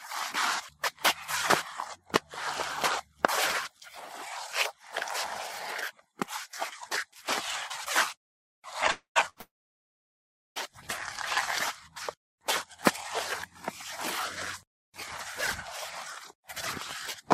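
At 8.91 to 9.18 s comes a call audio freeze. The last sound is held as a fading buzz, then about 120 ms of silence. Packets were likely held up and the jitter buffer ran empty. On a spectrogram this shows as smeared horizontal bands thinning to blank, and the waveform flattens before the audio resumes where it stopped.

At 9.30 to 9.38 s a short stall from a late packet stretches the sound for 69 ms, heard as a slight buzzing hold. It appears as a brief frozen, repeated texture in the spectrogram.

A second call audio freeze runs from 9.40 to 10.58 s, adding 1.15 s of delay. A brief fading tail gives way to about 1.08 s of silence, seen as a flat waveform and an empty spectrogram, before playback continues with nothing lost.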